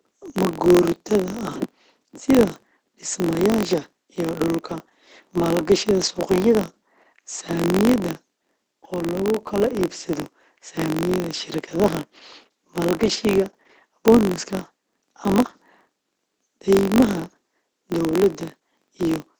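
Right from the start the speech has been through Opus voice compression, wideband SILK at a rate sounding near 10 kbps: muffled, hoarse, slightly robotic, with nothing above 8 kHz. The filter restarted on every block as well, dropping its state each time, so a buzz at 46.9 Hz rides along with the level, which fits a 1024-sample block.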